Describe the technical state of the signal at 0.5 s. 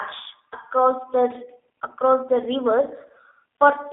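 A packet dropped between 0.51 and 0.55 s, about 20 ms of audio, which fits a single lost packet, and VoIP packet loss concealment from the speech codec filled the gap. The decoder extended the last pitch and filter at falling gain, giving a brief fading smear, buzzy or noise-like, that stays weak for a moment after the stream resumes. Underneath this, the G.729 codec, probably running near 8 kbit/s, rebuilds the speech from a coarse model, limiting the band to 250 Hz to 3.6 kHz and adding a clearly audible rough, synthetic texture.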